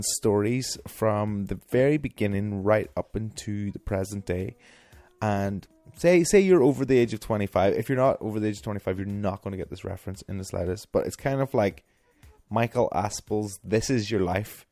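No faults can be heard anywhere in the clip.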